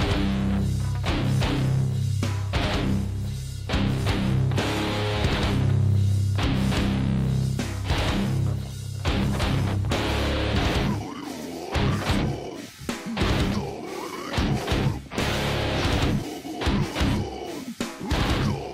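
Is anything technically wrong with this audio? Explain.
Yes. At 16.23 s there is damaged data in a compressed stream. A short run of the encoded data arrives corrupted, so the decoder cannot parse the frames there correctly, loses its place in the bitstream and has to hunt forward for the next valid frame header before it can resume. That breakdown is heard as a chirp, squawk, click or short hole at that moment.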